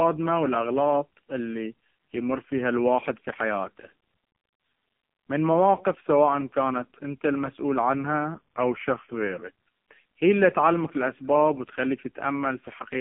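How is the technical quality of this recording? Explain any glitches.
The technical quality is poor: the whole recording is heavily degraded by a narrowband mobile codec, and one passage shifts in speed and pitch.

AMR narrowband mobile codec, throughout: the speech is confined to a telephone band of roughly 150 Hz to 3.4 kHz, with nothing above 3.4 kHz. The codec rebuilds the voice from a vocal-tract model fed by sparse pulses, and the damage here is heavy, which fits a very low bitrate around 5 kbps. The result is a buzzy, synthetic tone rather than the clean dullness of a simple low-pass filter.

Drift correction step, 8.35 to 9.43 s, just after "انت المسؤول": playback slows by about 5.5% and pitch drops by about a semitone (97 cents) for roughly a second, then snaps back. The likely cause is clock-matching software changing the playback rate in one jump to rebalance its buffer. Unlike tape wow, which wavers continuously, the speed holds steady throughout the passage and then returns abruptly to normal.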